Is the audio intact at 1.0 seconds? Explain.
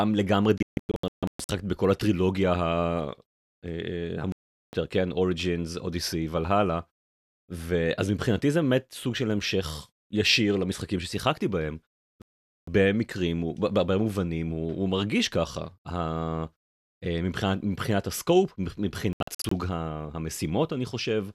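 No. At 1.0 s the audio falls inside a digital broadcast dropout running from 0.58 to 1.50 s. The receiver stopped getting usable frames, either because the signal was lost or because frames failed their checks, so it muted each bad stretch until good data arrived. The speech breaks into several short holes scattered over about 0.9 s, totalling 672 ms of silence, with the longest gap 144 ms. What was broadcast in those holes is gone.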